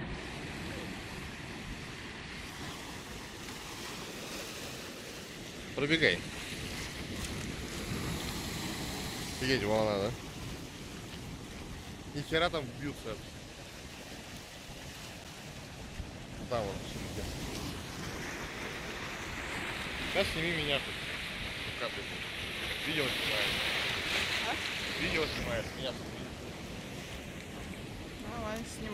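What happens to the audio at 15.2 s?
At 15.24 s the audio drops out for about 8 ms in a block of digital silence: a short run of samples is replaced by silence, as happens when the output buffer isn't filled in time. With no fade on either side, the hole is heard as a tick or dip. On the waveform it is a flat line; on a spectrogram it is a thin blank column.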